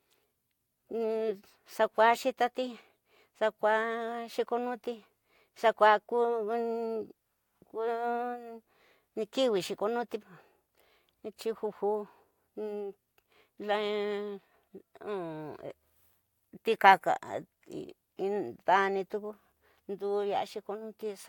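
No technical faults can be heard anywhere in the recording. The speech runs from beginning to end without any event that calls for comment.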